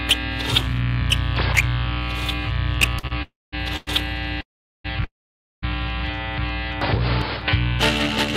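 At 2.99 to 3.05 s and again at 3.07 to 3.12 s there are two short stalls from a late packet. The sound is held for about 40 ms and then 30 ms while the jitter buffer runs dry, then resumes with nothing lost. On a spectrogram each appears as a brief horizontal smear of frozen spectral content. In the waveform it looks like a repeated cycle with a slight level dip.

From 3.22 to 3.54 s comes a call audio freeze, likely from packets held up in transit and an emptied jitter buffer. It inserts about 300 ms: a fading buzz, then about 220 ms of silence. A shorter one at 3.76 to 3.89 s fills about 100 ms with decaying buzz and no silence. Longer ones follow at 4.41 to 4.86 s (about 435 ms, 400 ms silent) and 5.04 to 5.64 s (about 580 ms, 530 ms silent). On a spectrogram each of the ones with silence shows a smeared band fading into a blank gap. In the waveform each of those is a tapering tail, then a flat line, before the sound picks up where it stopped.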